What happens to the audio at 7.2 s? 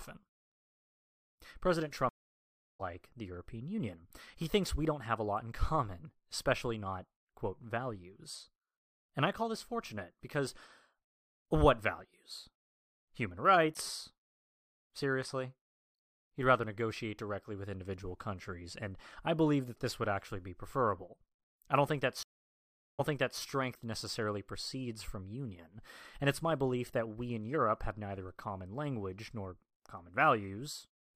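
Nothing goes wrong at 7.2 s; the speech carries on intact through that moment, with no dropout, click, distortion or other fault.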